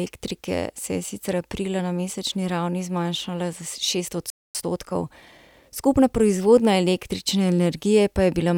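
A playback stall at 4.30 s cuts the speech off mid-flow, leaving about 0.25 s of silence, most likely because the player ran short of data or its thread was briefly blocked. Time-compressed catch-up follows from 4.55 to 6.19 s, starting on "proizvodnja električne": the player trims its backlog by splicing out small slices, so the speech runs about 1.15 times fast at normal pitch.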